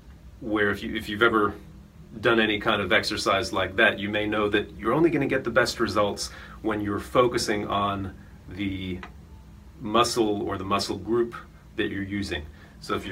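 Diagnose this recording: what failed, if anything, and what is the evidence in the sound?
Nothing here failed: listening all the way along, the sound never drops out, clicks, distorts or warps, so there's no failing stage to point to and no evidence of one to report.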